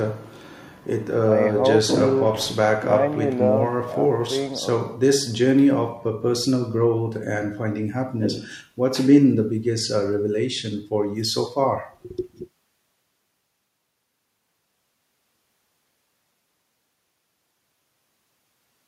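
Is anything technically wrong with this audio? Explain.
No, the speech signal comes through intact, with nothing in it that points to a technical fault.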